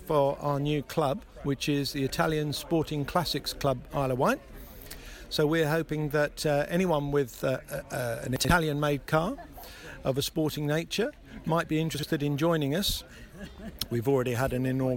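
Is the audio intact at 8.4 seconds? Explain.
No. From 8.36 to 8.49 s the chunks play out of order: a 43 ms chunk lands two chunks late, after material that should follow it. Unlike a dropout, nothing goes missing; the moment sounds jumbled, with three hard joins.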